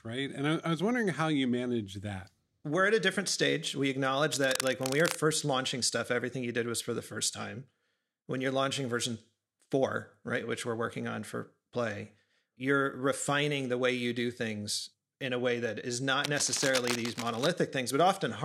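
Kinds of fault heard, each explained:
Cable scratch noise, 4.33 to 5.15 s and 16.24 to 17.47 s: dense, ragged bursts of scratching noise sit only slightly below the speech, likely from a worn cable or connector being moved so its contact resistance flickers. The first ends just before "launching stuff everything you".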